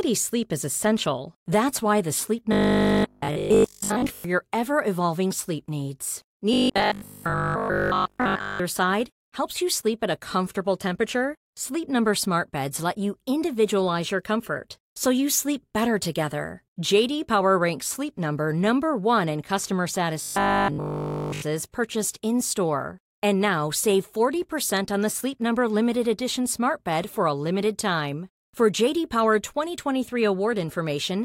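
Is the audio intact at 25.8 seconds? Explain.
Yes, at 25.8 seconds the speech runs through intact, with no dropout, click, distortion or other audible fault at that point.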